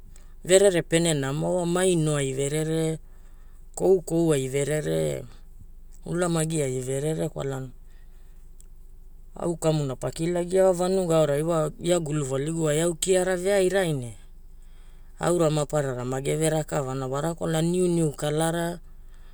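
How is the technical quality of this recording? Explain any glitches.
Nothing stood out as a technical problem on listening to this speech recording.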